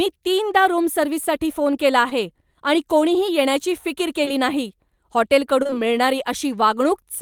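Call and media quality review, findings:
Short concealed packet loss at 2.09–2.13 s (after "रूम सर्व्हिससाठी फोन केला", before "आणि कोणीही येण्याची फिकीर"), 4.25–4.29 s (after "आणि कोणीही येण्याची फिकीर"), and a cluster at 5.63–5.75 s with overlapping hits at 5.67–5.71 s and 5.71–5.74 s.

Brief smear or wobble each time. Receiver jitter buffer and decoder: each gap matches a 20 ms packet arriving late. The decoder extended the last pitch or noise for 11–22 ms, then blended back. The 5.6 s cluster adds roughly 10 ms.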